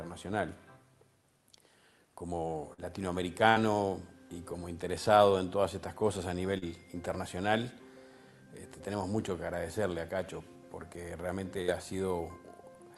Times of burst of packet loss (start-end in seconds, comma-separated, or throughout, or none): 3.49-3.58, 11.62-11.70